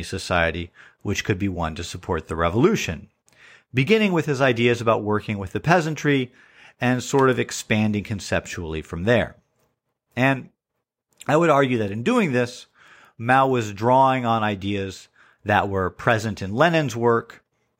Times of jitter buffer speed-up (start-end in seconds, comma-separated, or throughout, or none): none